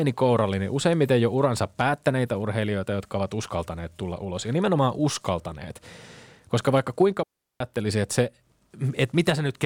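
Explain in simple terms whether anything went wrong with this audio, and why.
Something went wrong at 7.23 seconds. Right after "vaikka kuinka", the speech drops into near silence for about 0.37 seconds, then returns at "että se". This is a digital wireless dropout. The radio link lost too much data, so the receiver muted cleanly instead of playing noise.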